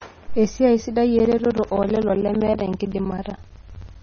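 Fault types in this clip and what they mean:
MP3 compression: The top end stops dead at about 6.6 kHz, and the speech has a watery, swirly quality from frequency detail flickering in and out between frames. That's heavy codec damage, likely from MP3 encoding at a very low bitrate, something around 24 kbps.
Periodic USB or driver dropouts: From 1.19 s to 3.95 s, roughly 10 ms of audio gets swapped for silence every 64 ms, about 40 gaps in all. It's the signature of a background task stalling the USB bus or audio driver on a fixed schedule, heard as evenly spaced ticks.
Pre-echo: Around 2.79 s a sharp attack has a brief smear of hiss ahead of it, spread over about 11 ms. The codec spread the noise meant for the loud onset across its whole block, so the quiet bit before the attack got filled and the onset softened.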